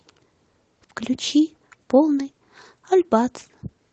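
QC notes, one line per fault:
No fault found: the speech carries the ordinary sound of call microphone processing and a WebRTC call path, with nothing above 8 kHz, which fits an Opus codec at a low bitrate of around 24 kbps.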